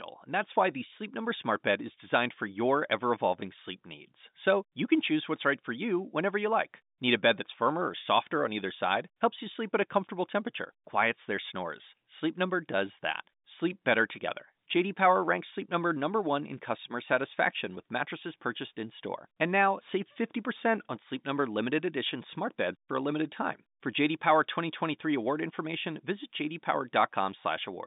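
Nothing goes wrong anywhere in this speech, which sits comfortably in an ordinary phone-line band of roughly 150 Hz to 3.7 kHz with nothing above 3.8 kHz, just as G.711 A-law telephone coding at 64 kbps would carry it.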